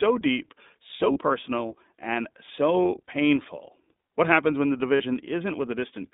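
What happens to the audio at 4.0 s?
At 4.0 s the speech carries iLBC codec damage, present across the whole clip. Each 20 ms frame's excitation is coded independently, which fits a 15.2 kbps mode, giving plainly audible rough, synthetic texture. A spectrogram shows energy confined to 150 Hz–3.7 kHz, with a hard ceiling.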